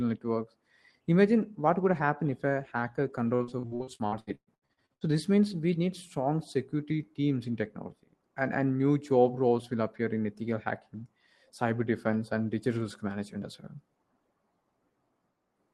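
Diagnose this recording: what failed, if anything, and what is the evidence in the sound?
Repeated network packet loss, 3.35 to 5.12 s: 16 gaps up to 119 ms, patched by extending earlier sound, leaving the speech choppy.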